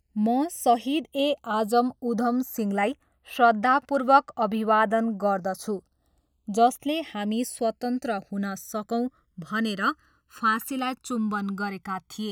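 Throughout, the channels are drifting apart: separate clocks roughly 100 ppm apart let the inter-channel delay grow to around a millisecond, so mono sums flange slowly.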